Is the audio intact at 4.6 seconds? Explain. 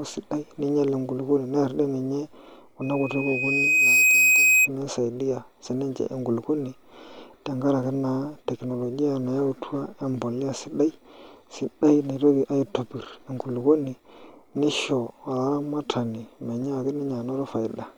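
No. At 4.6 seconds the speech is covered by a loudspeaker feedback squeal, which runs from 2.81 to 4.69 s. A microphone is picking up its own loudspeaker, and the loop runs away at 2.5 kHz. The tone swells over about a second to roughly 10 dB above the speech.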